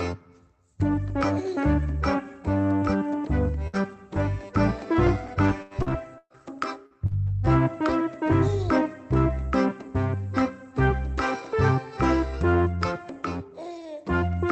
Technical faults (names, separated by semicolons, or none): burst of packet loss; lost packet rebuilt from error correction; repeated packet loss (robotic sound)